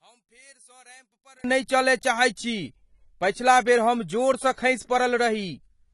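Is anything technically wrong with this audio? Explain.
Yes, there are two faults.

One channel inverted, from 0.0 to 1.44 s: the opening stretch sits about 31 dB below the rest of the clip, with the speech and its background both nearly gone. The likely cause is one stereo channel carrying reversed polarity. When the two channels were folded to mono, everything they shared cancelled, leaving only the small difference between them. At 1.44 s the full level returns.

AAC compression, throughout: the codec damage is plainly audible across the whole clip, and the spectrum stops at 12 kHz, giving the speech a dull, band-limited top. This is likely AAC-LC coding at a low rate, consistent with a bitrate around 32 kbps. At that budget the encoder quantises its frequency lines coarsely against a hearing model and lowers its cut-off, discarding high-frequency detail to save bits.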